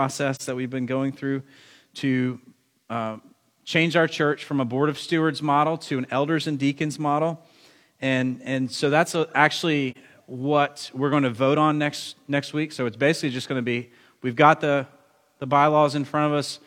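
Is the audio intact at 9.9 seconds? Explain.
No. From 9.91 to 9.96 s there is an AAC frame loss with muting: the sound fades out, leaves a brief dip, and fades back in. The decoder lost the data for that stretch and replaced its spectrum with zeros. The overlapping transform windows then taper the surrounding audio into and out of the gap, and the gap's length fits a single missing frame of about 43 ms. The fade-out and fade-in tell it apart from a hard sample dropout, which cuts off abruptly with a click at each edge; here the edges are soft.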